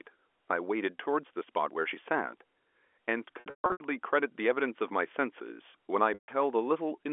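From 3.40 to 3.80 s, packet loss with pitch repetition breaks the speech. About 320 ms goes missing across 400 ms. The receiver repeats the last pitch period, giving a held buzz that fades to silence. At 6.14 s, a single 140 ms gap behaves the same way.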